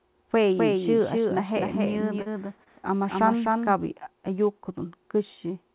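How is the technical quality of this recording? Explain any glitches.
The recording has two kinds of fault on a narrowband call path, with no content above 4 kHz, which fits the G.711 A-law codec at 64 kbps.

From 0.58 to 3.76 s there is a doubled audio track. A full-band copy trails about 300 ms behind and sits about 5 dB lower. It starts and stops abruptly, likely from a second capture path running out of step.

At 2.22 to 2.28 s and at 2.64 to 2.68 s there is short concealed packet loss. Gaps of about 40 ms and 20 ms were filled by extending the preceding sound. Each is heard as a brief smear or wobble.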